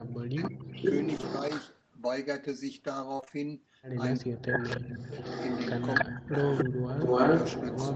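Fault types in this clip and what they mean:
speech suppressed in double talk: at 0.0–0.86 s, 4.18–5.19 s, 6.05–6.38 s, 6.64 s and 6.96 s, the speech dips by up to about 40 dB, likely an echo canceller ducking both sides while they overlapped.
echo leak: at 0.42–0.5 s, 0.76–1.8 s and 4.48 s to the end, a delayed copy of the speech returns 429 ms, then 288 ms, late, likely a loudspeaker echo the canceller missed.
short concealed packet loss: at 1.17 s and 1.21 s, two 20 ms holes were patched by extending the preceding sound, giving a brief smear.
repeated packet loss (robotic sound): at 3.17–3.32 s, four gaps of up to 25 ms were patched back to back, nearly half the span, sounding choppy.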